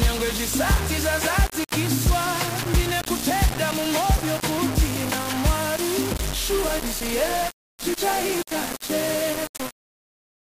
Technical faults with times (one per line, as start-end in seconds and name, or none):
0.00-10.45 low bit depth without dither